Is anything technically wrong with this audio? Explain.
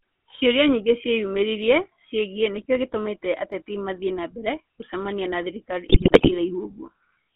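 Yes. The whole clip passes through a GSM full-rate codec, which fits the original 13 kbps coder. It models the vocal tract as a filter and feeds it a sparse train of regular pulses, discarding most of the excitation detail, while the phone line limits the band to roughly 200 Hz to 3.4 kHz. The result is speech with plainly audible damage: a buzzy, gravelly roughness over every syllable, no air or sibilant brightness above 3.4 kHz, and a thin, boxy tone.

From 5.86 to 6.35 s, just after "mbere gũcemania na thirikari", the speech is hit by GSM bit errors. Corrupted bits reached the decoder in a run of consecutive frames, which fits an error rate of around 4 to 5 percent across a couple of dozen 20 ms frames. Wrong filter, pitch and gain values make the spectrum lurch and the level jump frame by frame, so for about half a second the speech breaks into squawks, pops and a wet, gargling garble.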